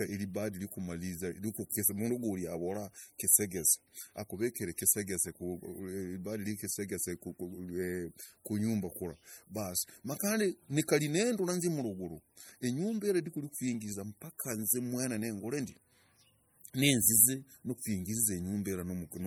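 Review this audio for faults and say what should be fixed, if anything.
MP3 compression artefacts are plainly audible throughout the speech. Weak frequency lines flicker between frames, giving a watery, swirly texture, metallic s sounds and smeared attacks. The likely cause is MP3 encoding starved of bits, consistent with about 48 kbps. Encode at a higher bitrate, or keep a lossless copy.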